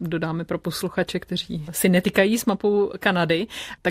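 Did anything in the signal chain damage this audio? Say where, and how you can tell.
No, nothing in this speech recording stood out as damage from any stage of the chain on listening.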